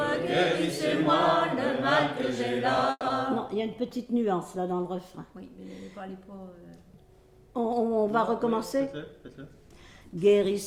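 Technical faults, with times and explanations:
2.91 to 3.12 s, long network dropout: The sound breaks off and the last moment is carried on as a fading buzz for about 190 ms, then roughly 30 ms of near silence follows before the audio resumes. The likely cause is a stretch of packets that never arrived in time, with the receiver filling the gap by extending what it last had. About 80 ms of the original audio is simply gone, and the playout delay appears to shift by about 50 ms around this point.
3.30 to 4.14 s, jitter buffer slow-down: Right after the gap, the audio plays at about 93% of its normal speed while the pitch stays unchanged, so sounds seem stretched and slightly sluggish. The receiver is rebuilding its reserve by repeating single pitch periods and small slices of quieter passages many times over. Across this span it inserts about 62 ms of extra material, which is heard as drawn-out sounds.
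8.48 to 9.62 s, jitter buffer speed-up: Here the audio runs at about 109% of normal speed at the same pitch and sounds rushed. The receiver has more audio queued than it needs, so it trims its delay by cutting out short pieces of one or a few pitch periods, repeated through the span. About 100 ms is removed in total. Because the cuts fall at period boundaries, the pitch holds steady while the timing tightens.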